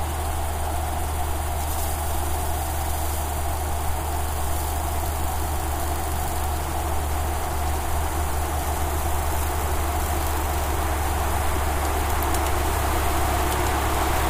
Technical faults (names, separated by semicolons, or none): none